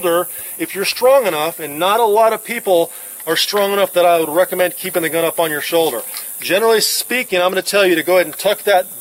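No technical faults can be heard anywhere in this audio.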